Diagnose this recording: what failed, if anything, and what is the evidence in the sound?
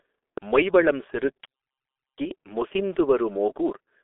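The failure is at the codec stage: the speech has passed through a G.723.1 codec throughout. Nothing survives above about 3.8 kHz, the band sits roughly within 300 Hz to 3.5 kHz, and the heavy smearing, hoarseness and blurred consonants point to a rate near 6.3 kbit/s, where 30 ms frames and a slowly updated voice model cannot follow fast changes.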